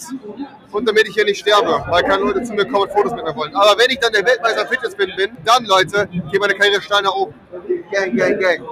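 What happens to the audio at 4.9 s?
At 4.9 s you're inside a stretch from 4.73 to 5.69 s where the sound is cut by the noise suppressor. It mistakes the sustained part for noise and pulls it down by about 13 dB at worst, so roughly half a second of held tone and decay sinks and thins while sharper onsets still poke through.

That dip sits within a wider problem. A noise suppressor built for speech is applied to music or sounds across the whole clip. Its gain keeps shifting, swinging by something like 15 dB, so steady material and tails keep getting ducked. The result pumps, flutters or thins out rather than sitting at an even level.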